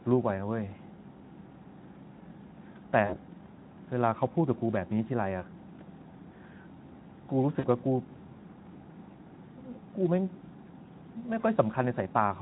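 Around 3.06 to 3.18 s and again at 7.59 to 7.65 s there's VoIP packet loss concealed by the speech codec. About 40 ms of packets went missing each time, which fits two frames. The decoder, Speex at a light-damage 15 kbps, stretches the last pitch into a brief buzzy, fading smear that lingers past the gap.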